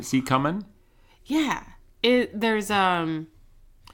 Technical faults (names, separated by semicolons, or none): word clock ticks